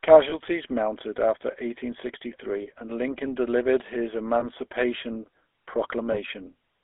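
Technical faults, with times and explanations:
Throughout: GSM full-rate codec. The speech has the buzzy, gravelly roughness of this early mobile codec, plainly audible across the clip. It models the vocal tract as a filter and drives it with a sparse train of regular pulses, so voiced sound comes out coarse and grainy. The sound is confined to a band of roughly 300 Hz to 3.5 kHz, which removes body at the bottom and air and sibilance at the top. The result is 13 kbps telephone quality.
0.3, 2.62 to 2.68, 4.4 and 6.12 to 6.18 s: lost GSM frames. At each point the decoder has no valid data and repeats the parameters of the last good frame, so the sound briefly freezes into a rough, metallic ring instead of continuing. The losses at 0.3, 4.4 and 6.12 s last about 20 ms, which points to a single missing frame each. The one at 2.62 s lasts about 40 ms, which fits two consecutive frames, and the ring is held longer there.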